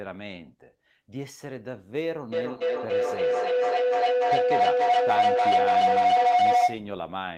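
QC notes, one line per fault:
2.32–6.96 s, feedback howl. A tone near 700 Hz builds up and peaks about 12 dB above the speech. It pulses roughly every 300 ms. A microphone-to-loudspeaker loop is adding gain on every pass, so the repeats grow rather than fade.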